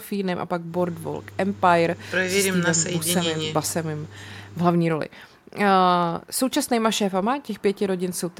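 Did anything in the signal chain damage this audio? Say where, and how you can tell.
No, nothing in the signal chain audibly damaged this speech recording, and no stage from capture through playback leaves any trace on it.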